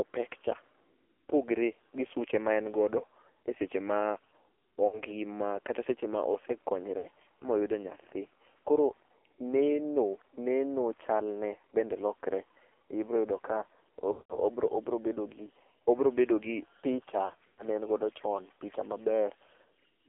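Throughout, the AMR narrowband mobile codec confines speech to about 300 Hz to 3.5 kHz. Its buzzy, synthetic texture points to a low mode near 5.9 kbps, unlike plain band-limiting. Lost AMR speech frames occur at 4.88–5.00 s, 6.98–7.07 s, 14.12–14.40 s and 17.26–17.66 s. In each, the decoder stretches the last sound with fading gain instead of cutting to clicks or gaps. The final stretch, scattered over about 320 ms, is the most broken.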